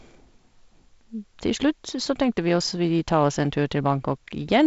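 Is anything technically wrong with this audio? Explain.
No, nothing technically wrong can be heard here.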